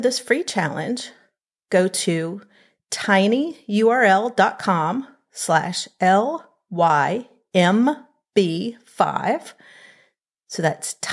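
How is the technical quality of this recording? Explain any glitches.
The recording's signal path holds steady for the whole clip, with no glitches or technical faults to report.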